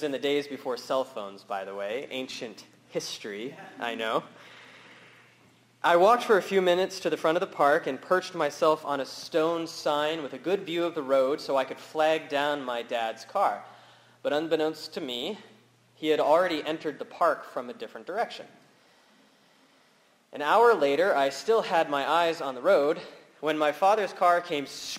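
Crude rate conversion runs throughout. Samples were repeated without filtering, fitting a 44.1 kHz to 48 kHz change. A gritty, inharmonic fizz sits roughly 30 dB down.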